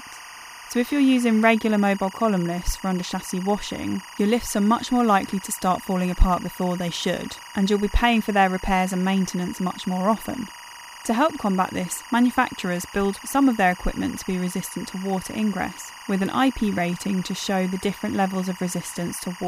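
A speech recording with timecode bleed throughout. A steady chirping warble sits well below the voice, switching near 1 and 2 kHz. Its rhythm fits 23.976 frame-per-second linear timecode leaking from a neighbouring track.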